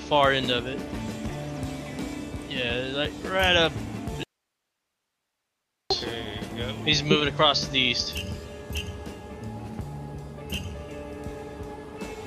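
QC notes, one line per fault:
4.23 to 5.90 s, audio dropout to a faint residue: the sound cuts out abruptly for about 1.67 s, leaving only hiss roughly 55 dB below the signal, then snaps back. That's likely a lost signal feed while the downstream path stayed live.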